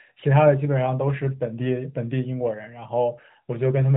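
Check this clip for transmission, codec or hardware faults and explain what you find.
No transmission, codec or hardware faults found; the speech runs over the AMR narrowband mobile codec at 12.2 kbps, which cuts everything above 4 kHz, as expected for that path.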